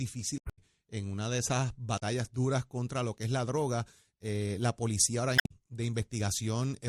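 At 0.35–0.59 s before "en una de esas", 1.96–2.02 s before "duras contra lo que", and 5.35–5.52 s, damaged data in the compressed stream throws the decoder off frame sync, producing brief chirps, squawks, clicks or short holes. Spectrograms show smeared broadband blocks; waveforms show abrupt discontinuities.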